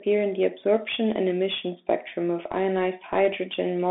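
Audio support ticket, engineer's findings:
Bluetooth CVSD headset codec, throughout. Speech band limited to about 200 Hz to 3.6 kHz, nothing above 3.8 kHz. Scratchy sibilants, overload distortion on loud bright sounds, granular hiss under speech. Cause: one-bit delta coding with an adaptive step that cannot keep up with fast, high-frequency changes. Fits a 64 kbps CVSD headset link.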